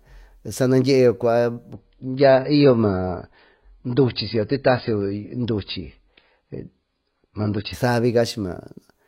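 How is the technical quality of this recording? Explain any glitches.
The speech has one stretch of degraded quality. From 1.73 s to 7.73 s, an adaptive stream at a lower bitrate takes over: the connection apparently slowed, so the player switched to a much leaner version of the same audio, consistent with a drop from around 96 kbit/s AAC to around 16 kbit/s. To fit that budget the encoder discards everything above 5 kHz, so the voice abruptly turns dull and muffled, with a coarser, more artificial grain, then snaps back to full clarity, all without any gap in playback.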